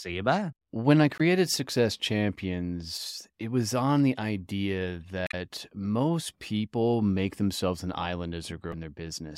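Brief glitches break into the speech at 1.17 to 1.21 s, 5.24 to 5.34 s and 8.70 to 8.74 s. These are damaged data in a compressed stream: corrupted frames the decoder misreads, losing sync until it finds the next valid frame header.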